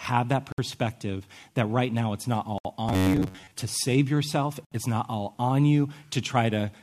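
A speech recording with short dropouts of silence and one robotic stretch. Abrupt, smeared silences of about 60 to 67 ms open at 0.52, 2.58 (after "right now it's not") and 4.65 s (after "to save yourself"), every 2 s. These are gaps at joins of encoded pieces, from encoder delay and padding left untrimmed. From 2.89 to 3.52 s, just before "to save yourself", the speech turns into a rigid metallic buzz at 93.8 Hz, with roughly 70% of the audio repeated. The likely cause is robotic sound from repeated short buffers, which fits a buffer of about 10.7 ms.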